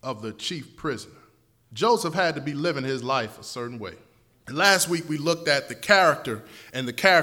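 Speech, and from about 4.65 s to the end at 7.22 s it turns thin and hissy-bright. That's pre-emphasis left on: the treble lift was never undone, so 10 kHz sits about 10 dB hot relative to 1 kHz, which fits an FM-style 50 µs curve.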